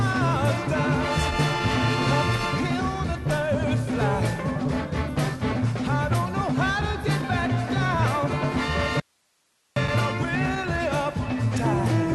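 At 9.00 s the sound cuts abruptly to an audio dropout to a faint residue, leaving only hiss about 45 dB down until 9.76 s, likely from a brief upstream signal loss. The waveform collapses to a thin noise band, and the spectrogram shows a faint gap below the call path's 12 kHz ceiling.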